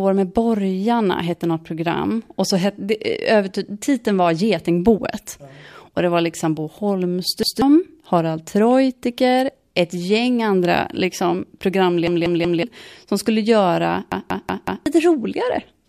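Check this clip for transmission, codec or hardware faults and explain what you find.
Three repeated-buffer faults are audible. Repeated buffer at 7.43–7.62 s, 12.07–12.63 s and 14.12–14.86 s: audio arrived late, so the same roughly 186 ms chunk (fitting an 8192-sample buffer) replayed one, three, then four extra times. Each event is a hard-edged stutter that drops about a fifth, half, then most of a second of speech.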